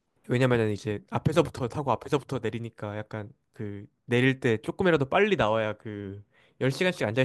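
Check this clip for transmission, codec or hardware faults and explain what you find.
Nothing in the speech points to a transmission, codec or hardware fault.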